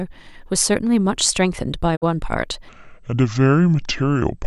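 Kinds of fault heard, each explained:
Digital broadcast dropout: the receiver stopped getting usable frames, either because it lost the signal or because frames failed their checksum, so it muted until clean data came back. Here the speech fades out over about 20 ms at 1.95 s and returns at 2.04 s, leaving a hole of roughly 48 ms. That length fits two lost frames. Whatever was sent during that gap is simply gone.
Section at the wrong speed: from 2.69 s to the end, the speech plays at 0.668 times its proper rate, so it sounds slower and deeper at once, sitting about seven semitones lower. Speed and pitch drop together, which shows the playback clock was off rather than the pitch being shifted on its own. The likely cause is a player or an edit running that stretch against the wrong clock.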